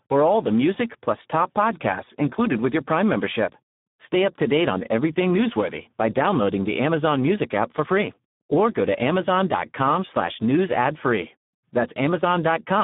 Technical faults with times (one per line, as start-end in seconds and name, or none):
0.00-12.84 Speex codec